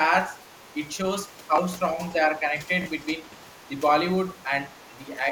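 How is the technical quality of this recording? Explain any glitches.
The recording is degraded by imperfect echo cancellation, with two recurring faults.

Other side's voice leaking through at 0.45–0.75 s, 3.53–3.78 s, 4.38–4.43 s and 4.75–4.97 s: faint far-end speech, about 35 dB below the talker (about 30 dB at the last), likely residual loudspeaker echo the canceller missed. It shows as weak extra harmonic traces on a spectrogram.

Speech suppressed in double talk at 1.93–2.00 s, 3.23–3.72 s and 4.97–5.21 s: the talker dips by about 5 dB, likely because the canceller turned everything down while both sides spoke. It appears as brief notches in the waveform envelope.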